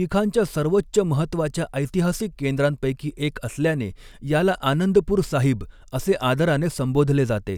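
No technical faults detected.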